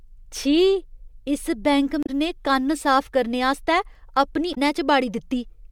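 At 2.03 to 2.10 s and again at 4.51 to 4.58 s, damaged data in the compressed stream breaks up the speech. The decoder misreads bad frames and resyncs, giving a brief glitch.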